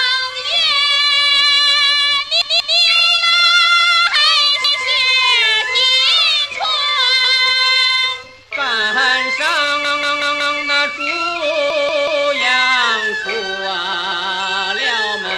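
At 2.42 to 2.79 s, 4.64 to 4.83 s, 7.25 to 7.43 s, 9.85 to 10.59 s, 11.70 to 12.26 s and 13.93 to 14.30 s there's a repeated buffer. New audio arrived late, so the same 186 ms chunk replays one to four times with hard joins, which fits an 8192-sample buffer.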